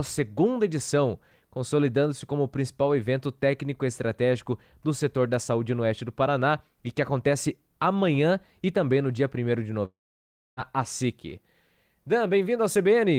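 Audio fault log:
9.85–10.60 s, long network dropout: sound smears into a fading buzz, then about 0.63 s of silence. Likely lost packets; roughly 0.72 s never returns.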